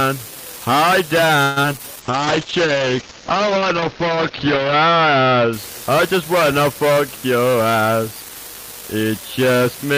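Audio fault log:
Throughout: unreliable data bit. A marginal data line flips one bit at random, adding equal-sized spikes heard as steady crackle, even in pauses.
1.43–1.58 s: call audio freeze. The last sound stretches into a fading buzz for about 130 ms, likely from delayed packets. Audio then resumes where it stopped.
1.62 s and 1.77–1.81 s: short concealed packet loss. About 20 ms goes missing each time. The receiver fills it with continued sound, giving brief smears or wobbles.
2.02–5.59 s: call bitrate drop. The bitrate falls from 40 to 8 kbps, with the cut-off dropping from 20 kHz to 8 kHz. Sound turns muffled and rough.
6.97–8.31 s: jitter buffer speed-up. The receiver removes short pitch-period pieces to cut excess delay, about 150 ms in total. Audio runs about 10% faster at unchanged pitch.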